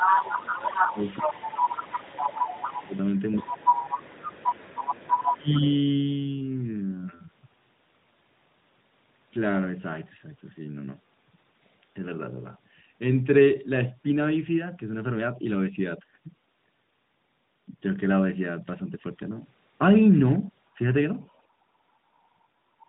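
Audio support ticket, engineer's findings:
Other side's voice leaking through, 0.0–5.74 s: a second voice at about the same level as the near talker, likely residual echo the canceller left in the mic path. At 21.29–21.39 s a very faint scrap returns. Unlike crosstalk, it tracks loudspeaker playback.

Speech suppressed in double talk, 0.12–2.93 s (about 2 s affected, dips near 15 dB), 3.43–3.78 s (near 15 dB), 5.17–5.5 s (about 25 dB, deepest) and 20.76–20.8 s (about 10 dB). The near voice ducks only while the far side talks, likely the canceller attenuating both sides together. Packet-loss gaps would not follow the far talker.

Lost AMR speech frames, 8.88–8.93 s: 40 ms of lost speech, which fits two lost 20 ms frames concealed by the AMR-NB decoder at 12.2 kbps. Decoder reuses the last good frame with falling gain. A brief smeared dip, not a hard cut.

Background gated by the echo canceller, 21.48 s to end: room noise drops by up to about 8 dB for roughly 1.5 s while the loudspeaker plays.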